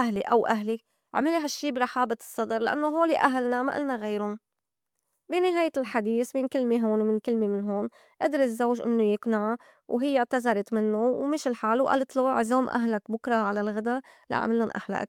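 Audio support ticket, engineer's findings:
No fault found on listening: speech path behaves as expected, no audible dropout, glitch or distortion to attribute to any component.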